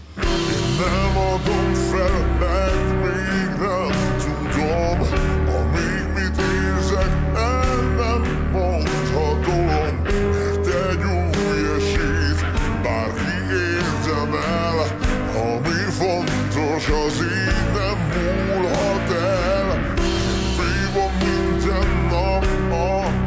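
Wrong sample rate: audio captured at 22 kHz is being played out at 16 kHz with no resampling, so every sample is held too long. Across the whole clip, speed and pitch drop together by the same ratio, about 0.73 times normal speed and roughly five and a half semitones lower. The sound comes across low, heavy and dragged, with everything stretched out, and nothing in the clip ever returns to its natural pace or pitch.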